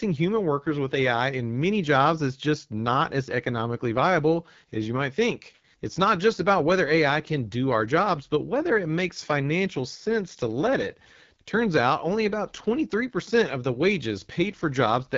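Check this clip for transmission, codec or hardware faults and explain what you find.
One codec fault runs through the whole clip: AMR wideband (HD Voice) coding. The speech is band-limited with nothing above 7.4 kHz, and it sounds rough and raspy. That roughness fits AMR-WB's low-rate 8.85 kbit/s mode, where the pulse-driven vocal tract model has too few bits to follow the speech closely.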